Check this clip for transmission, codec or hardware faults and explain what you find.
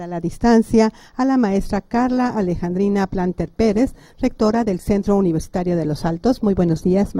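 One fault: an adaptive stream at a lower bitrate. From 1.49 s to the end, the player switched down to a leaner encoding, most likely because throughput fell, and stayed there. The change is abrupt and has no gap. The sound keeps flowing but suddenly loses polish: codec artefacts become audible. The drop fits a step from roughly 64 to 24 kbit/s Opus. Nothing is present above 20.2 kHz.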